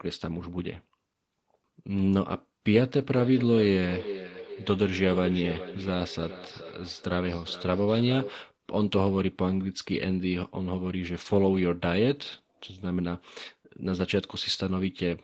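From 3.16 to 8.58 s the speech carries a feedback echo between two devices: a second device in the room replays the call, the first device's microphone recaptures it, and each phrase returns roughly every 0.4 s, thinner and ringing, peaking at about 12 dB below the speech.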